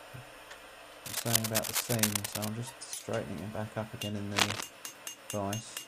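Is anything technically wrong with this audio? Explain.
Yes, there's cable scratch noise in two places: from 1.05 to 2.48 s, and again, more briefly, from 4.31 to 4.61 s. Both bursts sit a little louder than the audio itself, a dense, uneven scratching and rustling laid over everything. That's most likely a worn cable, connector or control being moved, so the contact resistance jumps around rapidly and sprays those crackly noise bursts into the signal for as long as the movement lasts.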